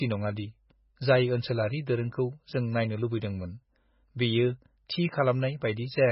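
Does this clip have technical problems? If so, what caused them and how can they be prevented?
Yes: throughout, the speech sounds watery and swirly with nothing above 5.5 kHz, likely MP3 compression at a very low bitrate near 16 kbps; the shifting chirps distinguish it from simple filtering. Prevent it by encoding at a much higher bitrate or using lossless formats.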